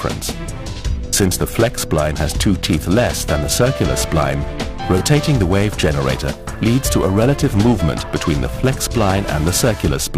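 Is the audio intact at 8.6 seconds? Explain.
No, periodic clock jitter runs throughout: interference wobbles the converter clock at around 1 kHz, adding sidebands that give sound a rough, metallic edge, strongest on high content.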